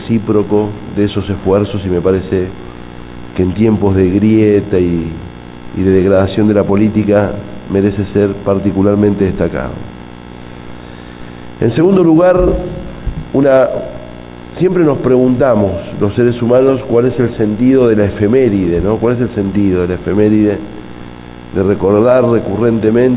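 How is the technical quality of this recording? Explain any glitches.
No glitches or faults detected.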